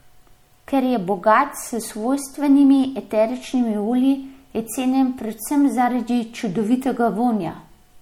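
Throughout the speech, the sound is watery and swirly, likely from MP3 compression at a bitrate consistent with 64 kbps; a spectrogram shows flickering holes.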